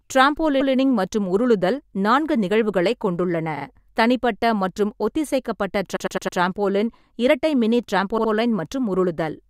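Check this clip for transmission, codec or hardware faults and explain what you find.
The speech shows repeated frames at 0.60, 3.56, 5.95 and 8.17 s. A short compressed block (128, 43, 107 and 64 ms) replays one to four extra times, giving a stutter. Each repeat lengthens the audio, up to 0.43 s at 5.95 s.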